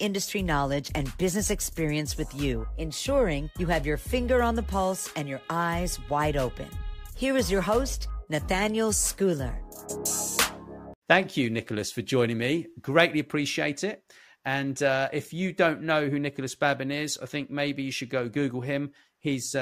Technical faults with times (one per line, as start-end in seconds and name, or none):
none